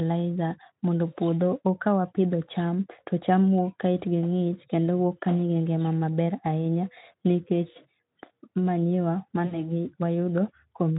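At 9.45 s, about 60 ms of the speech drops out, consistent with three lost 20 ms packets, and the gap is filled by VoIP packet loss concealment in the speech codec, here Speex, whose own coding leaves at most faint traces. The decoder repeats its last pitch and filter with falling gain, so the sound turns into a short buzzy tone or coloured noise fading toward 9.59 s. A spectrogram shows the stretched sound dimming frame by frame, and the waveform shrinks in amplitude.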